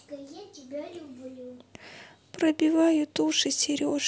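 No faults are audible anywhere in the speech.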